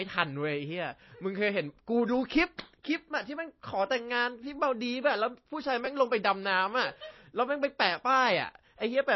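From start to finish the speech has plainly audible coding damage, likely MP3 compression. Nothing is present above 5.8 kHz, and the remaining band has a watery, swirling texture where weak frequency components drop in and out from one frame to the next as the encoder discards them to save bits. That degree of loss points to a low bitrate, in the region of 24 kbps.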